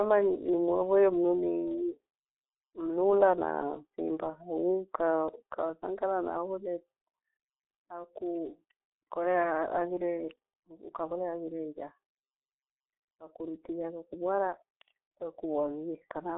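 Speech passed through a G.723.1 codec throughout: nothing above 3.8 kHz, a narrow telephone band, and heavy hoarse, muffled coding damage that fits roughly 6.3 kbit/s.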